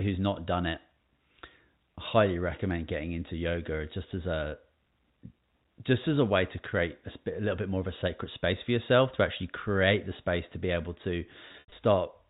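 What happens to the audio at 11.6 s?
Right after "to be able to", from 11.48 to 11.72 s, packet loss with pitch repetition: about 140 ms went missing in bursts, longest 80 ms, patched by looping the last pitch period. Unlike a plain dropout, the gaps sound like a buzzy, held tone fading toward silence before speech cross-fades back.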